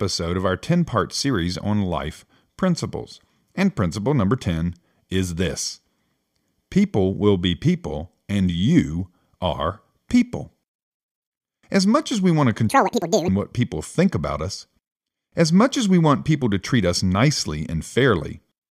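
Audio read two samples at a time (double speed) hits the speech from 12.69 to 13.28 s. For that stretch of about 0.6 s, the reader treated each pair of consecutive samples as a single frame, as though the stream held two channels or samples twice as wide. Playback therefore runs at 2x speed and jumps a full octave, 12 semitones, higher, giving a chipmunk-like squeak.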